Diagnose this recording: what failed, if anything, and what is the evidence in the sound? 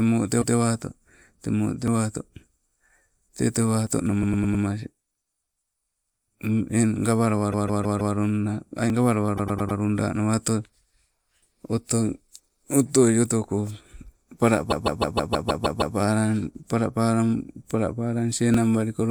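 Repeated frames, at the codec or storage stage. A short block of sound plays again in place, giving a stutter at 0.41–0.56 s (a 156.7 ms block heard twice), 4.22–4.64 s (104.5 ms block, four extra plays), 7.51–8.14 s (156.7 ms, four extra), 9.37–9.78 s (104.5 ms, four extra) and 14.70–15.95 s (156.7 ms, eight extra). Identical loops of that size point to runs of compressed frames being written or sent more than once. Each run lengthens the audio by the repeated time, 1.25 s in the longest case.

Audio missing between chunks, at the driver or buffer stage of the recorder or processor. Brief skips, each a few milliseconds, fall at 1.88, 3.87, 6.28, 8.90, 11.31, 16.55 and 18.54 s. The sound jumps forward with no gap of silence. Their regular spacing fits 2-second processing chunks, so the likely cause is a small piece lost each time one chunk closes and the next opens, with the two ends butted together.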